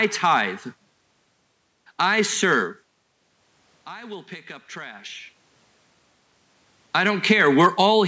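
From 0.00 to 0.41 s and again from 6.95 to 8.0 s, the speech shows hard clipping, with the signal driven about 3 dB past what one stage could pass, so its loudest peaks are sliced flat. Those peaks get a gritty crackle rather than a full fuzz. On a waveform the tops sit squared off and flat, and a spectrogram shows vertical smears of added harmonics reaching high up the band at each flattened peak.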